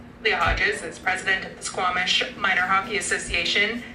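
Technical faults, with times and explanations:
No technical faults can be heard in this audio. Nothing in it calls for a time or an explanation.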